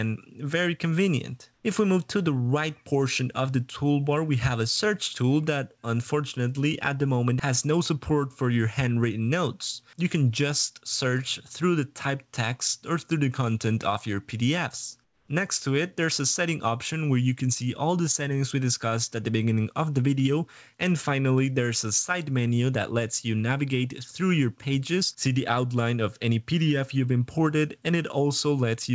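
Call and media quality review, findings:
Comfort noise in place of the background at 1.54–1.64 s and 15.04–15.28 s: flat, featureless hiss about 2 dB, then about 8 dB quieter. Never true silence, unlike a dropout. Likely DTX during pauses.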